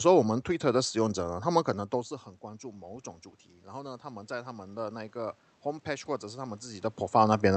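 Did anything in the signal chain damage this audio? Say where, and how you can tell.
Yes. The automatic gain rising happens in call processing, where the automatic gain control reacts after the input falls by about 17 dB as the talker moves away from the microphone. From 1.09 to 3.1 s the gain climbs by about 3 dB, then from 3.64 to 6.92 s by a further 7 dB or so. The room noise swells together with the voice, which shows the gain being turned up gradually rather than the talker getting louder.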